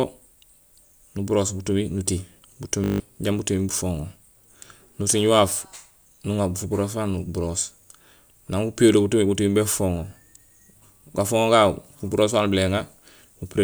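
Speech, with a system hang loop from 2.84 to 3.00 s. A 20 ms fragment repeats eight times, buzzing at 50 Hz, and roughly 150 ms of audio is lost.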